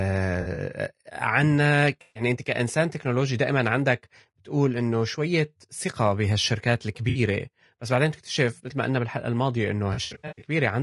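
Low-delay AAC compression runs through the whole speech clip, likely from AAC-ELD at a bitrate around 32 kbps. Its short frames resolve the pitch harmonics coarsely and the low bitrate leaves too few bits, so the voice sounds plainly rough and grainy, with noise filling the gaps between harmonics and a thin, synthetic-sounding top band.

AAC frame loss with concealment appears four times. In each case the decoder replaces missing frames with a guess built from the last good spectrum. From 0.41 to 0.59 s, about 80 ms goes missing in pieces spread over 160 ms, with the longest gap around 40 ms, and it is heard as brief smeared, noisy flickers. From 2.01 to 2.23 s, 140 ms lost becomes a phasey, blurred patch. From 7.09 to 7.19 s, a 60 ms loss smears briefly. From 9.93 to 10.47 s, about 320 ms is lost across 480 ms, with runs up to roughly 100 ms, and the sound turns noisy.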